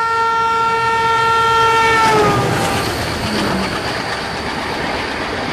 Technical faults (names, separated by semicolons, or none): none